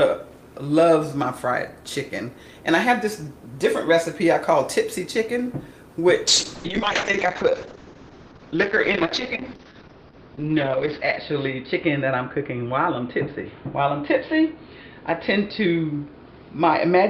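At 6.28 s a call bitrate drop sets in and runs to the end of the clip. The top end collapses from 20 kHz to 6 kHz and the sound turns muffled and coarse, which fits the encoder falling from 48 kbps to 7 kbps, with the worst stretch lasting about 4.9 s.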